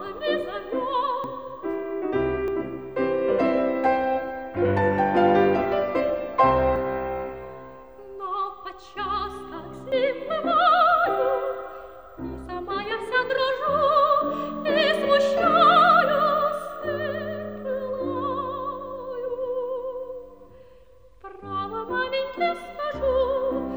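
Four times the recording side likely failed to collect its samples before the hardware overwrote them, a dropped buffer (overrun), so a short stretch of audio is lost and the two sides are spliced together with no gap. At 1.24, 2.48 and 6.76 s roughly 40 ms vanishes, and at 9.92 s a longer piece of about 70 ms. Each is heard as the sound jumping abruptly forward.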